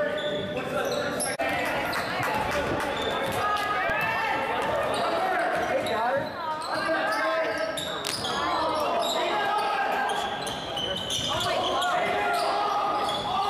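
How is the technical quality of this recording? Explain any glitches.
Two brief technical faults interrupt the recording. At 3.9 s an underrun with held sample freezes the output for about 2 ms at its last value rather than dropping to silence. About 2 ms of audio is lost. From 8.05 to 8.40 s, cable scratch noise adds dense, uneven crackling about 10 dB below the signal, likely from a worn cable or connector being moved. Its irregular bursts set it apart from steady hiss.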